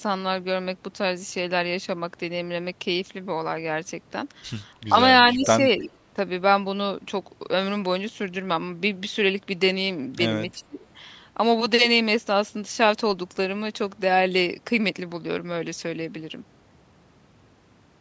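At 4.90 s the speech level dips briefly, by a few decibels for about 50 ms, and at 5.33 to 5.45 s it drops harder, by roughly 15 dB. These dips recur at 5.89 to 5.99 s and, deepest, at 10.53 to 10.79 s, where the level falls by around 20 dB for about a fifth of a second. This is speech suppressed in double talk, likely the call's echo canceller treating overlapping far-end sound as echo and pulling the near-end signal down along with it, so the voice briefly dips.

At 5.43 to 5.47 s and again at 5.80 to 5.88 s, a faint delayed copy of the sound appears, trailing the original by 295 ms. It sits roughly 15 dB below the main signal the first time and about 20 dB below it the second time. This is echo leak. Loudspeaker pickup at one end was likely not fully cancelled and was sent back, so it is heard as short, weak scraps of repeated sound. Throughout the clip, the call microphone processing limits content to nothing above 8 kHz.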